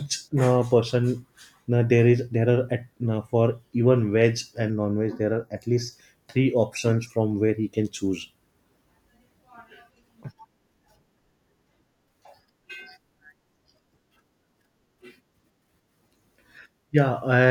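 From 4.70 to 5.93 s, after "for even veg", the speech turns hollow and phasey. This is channel delay (comb filtering): one channel lags by a fraction of a millisecond, cutting notches from around 3 kHz.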